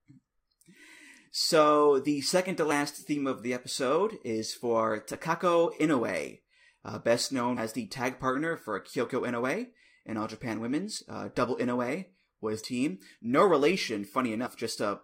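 Compressed frames skipped at 2.70 s (between "so the second to" and "theme of the episode"), 7.56 s (between "uh best" and "the tag partner for"), 10.97 s, 12.63 s and 14.45 to 14.47 s: whole frames that were missing or rejected never play, so the speech jumps ahead by roughly 70 to 150 ms each time.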